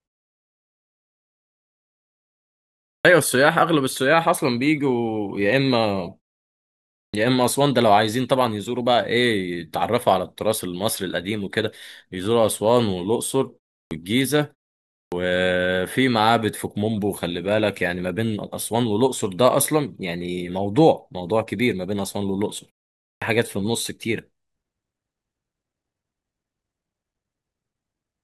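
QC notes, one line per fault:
2.99, 7.08, 13.85, 15.06 and 23.15 s: clipped start after a pause. Each time speech resumes, 57 to 66 ms of onset is missing, so words start abruptly. The output idles during gaps as short as 0.34 s and wakes too late.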